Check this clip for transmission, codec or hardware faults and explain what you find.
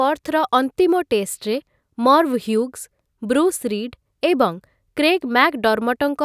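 No transmission, codec or hardware faults show up anywhere in this speech recording.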